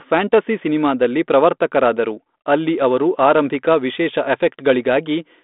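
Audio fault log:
No faults heard anywhere in this speech recording.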